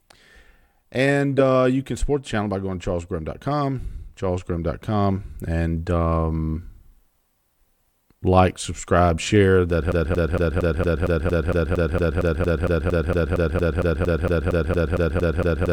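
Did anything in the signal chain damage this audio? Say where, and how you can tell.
Yes. A likely playback or stream stall from 9.92 s makes a broken-record loop: one 0.23 s fragment repeats about 25 times to the end, replacing the lost speech.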